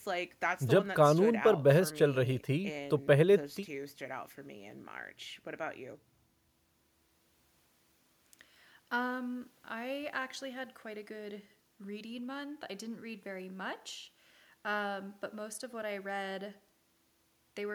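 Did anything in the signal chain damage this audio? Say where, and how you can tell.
No, nothing along the chain seems to have harmed this speech recording, so there's no stage to point at and no damage to trace.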